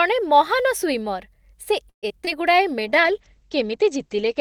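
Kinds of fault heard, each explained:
Repeated packet loss (robotic sound): from 1.89 to 2.29 s, four gaps hit in quick succession, the longest 132 ms. Each is filled by stretching the last audio, about 44% of the span concealed, so the speech turns choppy with pieces missing.
Call bitrate drop: from 2.81 s to the end, the encoder falls from 48 to 10 kbps and its bandwidth from 20 kHz to 8 kHz. The speech is coded coarsely and loses its top end, sounding muffled and rough for the rest of the clip.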